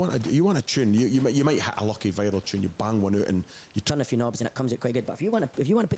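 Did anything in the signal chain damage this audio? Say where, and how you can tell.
Yes. The capture stage shows gain pumping throughout: the input gain was likely set far too high, so a fast limiter keeps pulling the level down on each loud sound. The level swings by about 5 dB, flattening the dynamics.

From 3.90 s, right after "one out and you", to the end, the section is at the wrong speed: it plays 1.22 times too fast, probably at playback or editing against the wrong clock. Pitch rises by about three semitones and the pace quickens with it, so the speech sounds hurried and high.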